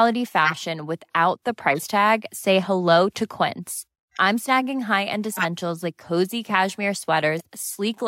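At 0.45 to 0.59 s the speech is hit by a corrupt frame decoded: damaged bits in a few compressed frames were played anyway, throwing strong energy, peaking near about -5 dBFS, into the wrong frequencies as a harsh chirp and noise burst. At 1.70 to 1.83 s, compressed frames were skipped. Roughly 50 ms of speech is missing and the audio jumps ahead. More corrupt frames follow at 4.14 to 4.18 s and 7.37 to 7.45 s as faint squeaks near about -25 dBFS, and at 5.32 to 5.45 s as another loud burst near about -5 dBFS.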